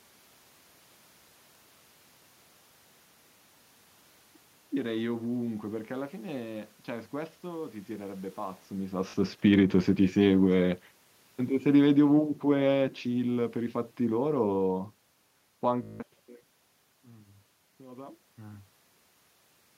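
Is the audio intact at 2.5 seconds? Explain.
Yes, at 2.5 seconds the speech is intact, with no technical fault, only the background noise of the room that belongs to the recording itself.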